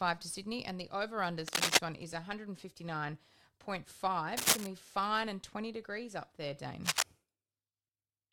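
A speech recording with three brief bursts of scratchy, rustling noise laid over the talking: from 1.48 to 1.77 s, right after "and the over" and before "one is", loud at roughly 10 dB above the speech; from 4.37 to 4.67 s, just ahead of "to be fine and"; and from 6.82 to 7.03 s, after "degrees up there", both a little above the speech. This is cable scratch noise, likely from a worn cable or connector being moved so its contact resistance jumps about erratically.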